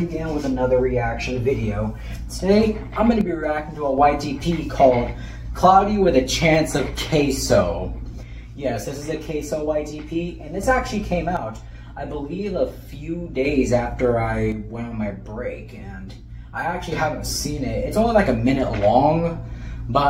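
At 3.21–3.98 s, 8.23–10.63 s, 11.37–13.45 s and 14.52–16.92 s the level steps down by about 6 dB and then snaps back, which is likely one channel dropping out before the mono sum. Unlike a fade or gain dip, each drop is instant and held steady.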